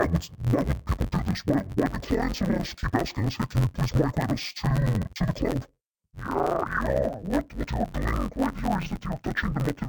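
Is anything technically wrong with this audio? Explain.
Yes. Throughout, the speech has interleaved audio read as planar. Each 10.88 ms block is split into halves played together, giving dull, robotic sound buzzing near 91.9 Hz.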